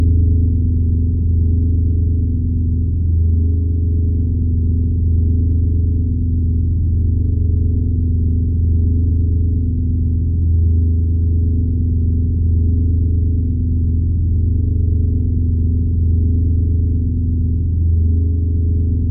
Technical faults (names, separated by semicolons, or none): none